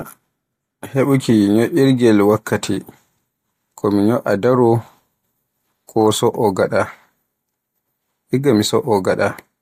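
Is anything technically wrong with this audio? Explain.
No, nothing technically wrong can be heard in this speech recording. The signal stays steady throughout, with no event that points to a problem in the recording or playback chain.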